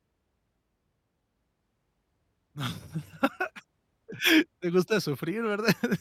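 Speech recording with no audible technical faults anywhere in the signal.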